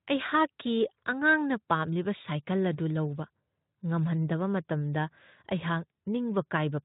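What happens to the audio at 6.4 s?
Nothing goes wrong at 6.4 s: the speech there is intact, carrying only the light coding of the Speex path it passes through.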